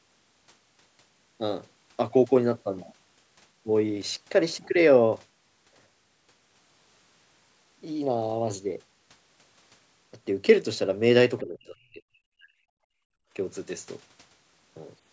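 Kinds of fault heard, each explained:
Speech suppressed in double talk: the speech dips by roughly 25 dB from 11.4 to 12.02 s, then cuts out more deeply, around 40 dB, from 12.18 to 12.54 s. The likely cause is an echo canceller that could not separate overlapping talk from loudspeaker echo and turned both down.
Background gated by the echo canceller: the room sound drops away by about 27 dB from 12.82 to 13.32 s, then returns. The canceller clamped the microphone hard while the loudspeaker played, pulling the background down with it, and released it half a second later.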